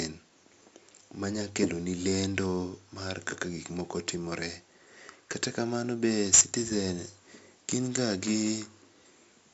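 From start to end, 4-bit ADPCM compression adds gritty hiss that tracks loudness and roughens sharp attacks, with nothing above 7.7 kHz. Unlike bit-crushing, the noise drops along with the quiet speech.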